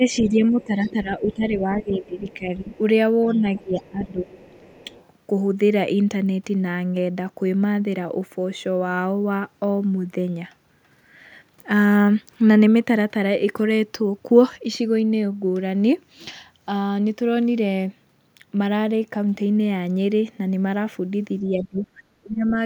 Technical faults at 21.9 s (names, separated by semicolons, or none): speech suppressed in double talk